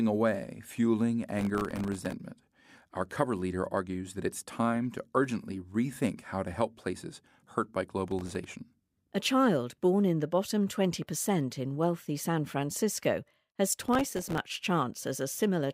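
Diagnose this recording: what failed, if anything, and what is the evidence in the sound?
Processor overload crackle at the driver/buffer stage: 1.39–2.13 s after "away fueling", 8.08–8.45 s after "help places hurt by", 13.72–14.38 s. Dozens of millisecond-scale buffers missed and left silent; the waveform shows dense dropouts, and the spectrogram shows vertical broadband streaks.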